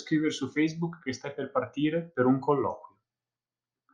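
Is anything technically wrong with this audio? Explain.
No technical faults are audible.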